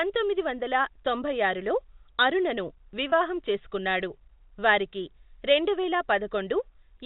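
At 3.10 to 3.12 s in this speech clip, between "వందల తొంభై ఆరులో అరుణను" and "చేసుకున్నాడు వారికి రెండువేల", the sound briefly holds on a slightly buzzy, frozen tone. This is packet loss with pitch repetition: about 20 ms of audio went missing, consistent with a single dropped packet, and the receiver filled the gap by looping the last pitch period. The band-limited telephone character comes from G.711 A-law coding.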